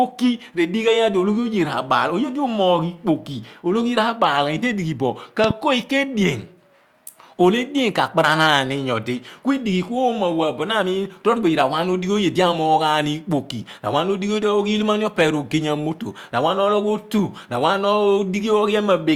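At 5.44 s a loud pop breaks into the speech, two sharp hits in quick succession ending by 5.53 s and standing well above the level of the talking. The likely cause is a sudden voltage step, such as static or a switch, whose pulse the following circuitry rounds into a thump. Unlike a dropout or digital glitch, nothing is removed: the speech carries on unbroken beneath both pops.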